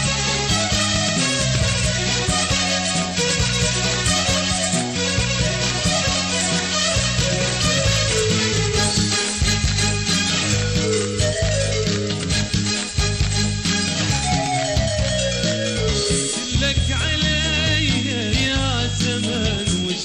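A feedback whistle appears at 14.99 s and continues to the end of the audio at 20.04 s. It is a thin, steady tone at about 3.3 kHz, sitting roughly 10 dB below the main signal and swelling and fading slowly in level rather than building up. The likely cause is a loudspeaker-to-microphone loop running just at the edge of instability, where gain at that one frequency is high enough to sustain a ring but not to run away into a full howl.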